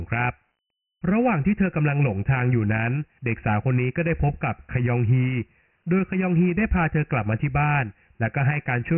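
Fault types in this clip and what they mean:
Dialogic VOX ADPCM: the speech is coded as coarse 4-bit ADPCM steps at a low sample rate, with nothing above 3 kHz, which points to the 6,000-samples-a-second form at about 24 kbps. The damage is heavy: a gritty, granular hiss rides on the speech throughout. A spectrogram shows a flat ceiling at 3 kHz and a raised noise floor tracking each syllable, while the waveform looks stepped and rough.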